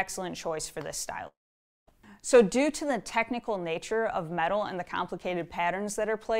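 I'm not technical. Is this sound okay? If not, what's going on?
No, there are two problems. From 1.27 to 1.89 s the sound cuts out: what was playing trails off as a short fading buzz, then goes quiet until it resumes with a chunk missing. That's likely a long network dropout, where audio never arrived.

Then at about 2.35 to 2.40 s there's a brief crackle. That's hard clipping: the loudest moments were too big for the system, so their tops got sliced flat. It's mild, so you get a short rough edge rather than constant fuzz.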